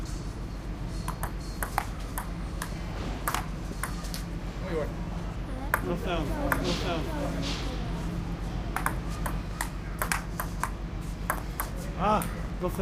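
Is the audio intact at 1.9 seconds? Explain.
Yes, the audio is intact at 1.9 seconds, with no dropout, click, distortion or other fault audible at that point.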